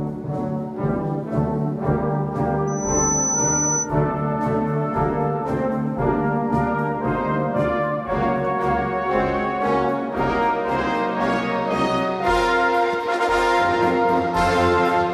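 From 2.67 to 3.89 s, a microphone picks up its own loudspeaker and the loop gain exceeds one near 6 kHz, causing loudspeaker feedback squeal. A piercing 6 kHz tone swells over roughly a third of a second until it matches the surrounding sound.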